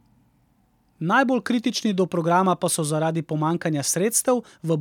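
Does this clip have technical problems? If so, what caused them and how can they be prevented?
No, there are no technical problems in this clip.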